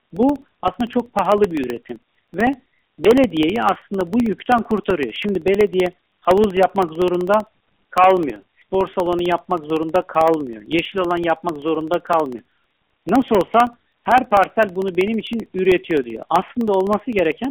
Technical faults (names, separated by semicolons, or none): periodic USB or driver dropouts